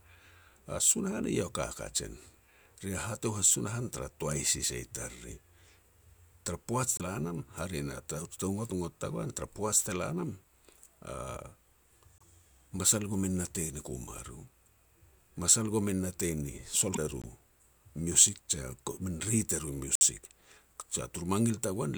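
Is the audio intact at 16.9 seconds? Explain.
No. After "masal komin natei ni", 16.93 to 16.98 s skips ahead and comes out as a chirp, a burst of noise or a short hole, likely a broken MP3 bit reservoir decoding another frame's bytes.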